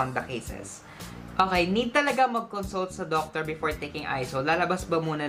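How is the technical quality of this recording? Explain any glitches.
The technical quality of the recording is sound, with no glitches to explain.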